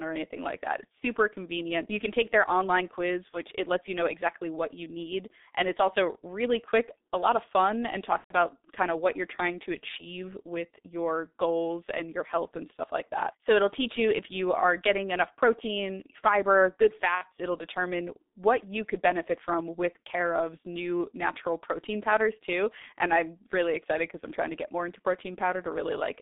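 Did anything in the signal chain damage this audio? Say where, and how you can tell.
Yes. The codec stage is the culprit throughout: G.723.1 at about 6.3 kbit/s leaves only roughly 250 Hz to 3.7 kHz, so speech sounds muffled and hoarse, consonants smeared.

On the network side, there's VoIP packet loss concealed by the speech codec at 3.29–3.39 s, 8.18–8.33 s and 17.15–17.24 s. The decoder stretches the last sound into a fading buzzy tone or coloured noise over gaps of about 30, 120 and 60 ms, which fit whole 30 ms frames.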